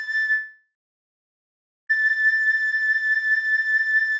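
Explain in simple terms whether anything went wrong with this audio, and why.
From 0.32 to 1.91 s the sound stops and is replaced by a brief fading buzz, then about 1.2 s of silence, likely a long network dropout. The receiver patched the gap, but that stretch of audio was lost and never recovered.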